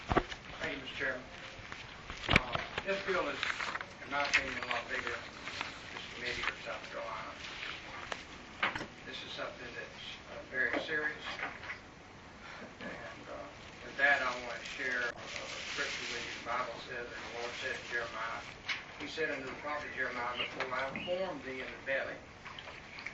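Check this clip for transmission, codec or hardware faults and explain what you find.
There is one recurring fault, corrupt frame decoded, at 0.90–0.96 s, 4.05–4.09 s, 8.75–8.86 s, 15.10–15.21 s, 17.73–17.76 s and 20.41–20.45 s. Compressed frames arrived with damaged bits and were decoded anyway. The misread gains and codes spread energy into wrong frequencies across a few frames each time. This is heard as short chirps or noisy blips peaking at about -35 to -25 dBFS.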